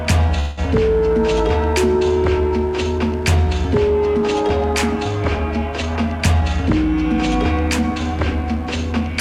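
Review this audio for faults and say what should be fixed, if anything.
There's a mains buzz running under the whole piece of music: a raspy 50 Hz hum with harmonics climbing into the kilohertz range, sitting roughly 20 dB below the music. Switching spikes from a dimmer or rectifier, or a missing shield, are getting into the chain. Use shielded cabling, lift the ground loop, and keep dimmers off that circuit.

From 0.39 to 0.59 s there's a call audio freeze. The last sound gets stretched into a fading buzz or hiss for about 180 ms, then the music picks up where it stopped with nothing lost, just pushed 180 ms later. That's likely packets stalling in transit and the jitter buffer running dry. A steadier network path or a deeper jitter buffer should prevent it.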